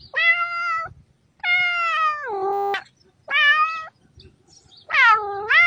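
At 2.53 s a system hang loop sets in and lasts until 2.74 s. The machine or its audio driver stalled while the sound hardware kept replaying the same small ring buffer, so a single 10 ms slice of audio repeats about 21 times. Because the slice is so short, the loop is heard as a steady 100 Hz buzz rather than a stutter, and roughly a fifth of a second of real audio is lost.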